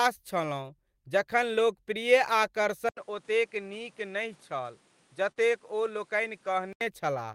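At 2.89 s the sound drops out for 80 ms and returns audibly changed. Nothing above 11.4 kHz remains, the level falls by a few decibels, and a new background hiss sits around 35 dB below the signal. This is most likely an input switched to a poorer device, with the system moving to a narrower-band input with its own tone and noise. The duller, boxier character holds until 6.81 s, when the fuller sound returns.

Within that stretch, from 5.31 to 5.39 s, there is short concealed packet loss. About 40 ms of audio never arrived in time, and the receiver synthesised roughly 43 ms to cover it by extending the preceding sound before crossfading back into the real signal. It comes across as a brief smeared wobble, with a momentary loss of definition where the gap was patched.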